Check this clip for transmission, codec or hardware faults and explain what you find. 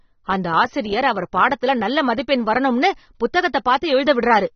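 One fault, and it runs the full length of the clip. Throughout, the speech sounds dull and plainly fizzy, with nothing above 6.3 kHz. That's likely AAC compression at a low bitrate, around 24 kbps, chopping the top end and quantising coarsely.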